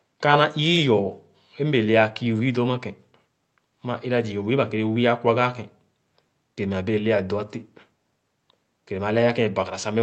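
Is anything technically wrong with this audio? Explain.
No, nothing is technically wrong with this speech. It has been carried over a WebRTC call path with an Opus-style codec, and the content stopping at about 8 kHz reflects that codec's normal bandwidth.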